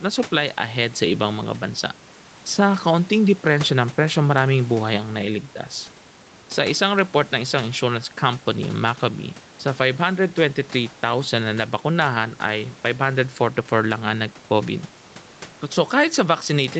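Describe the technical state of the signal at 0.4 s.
At 0.4 s the speech is intact, with no fault to be heard, only the room noise sitting about 26 dB below the voice and the call path's usual band limit with nothing above 8 kHz.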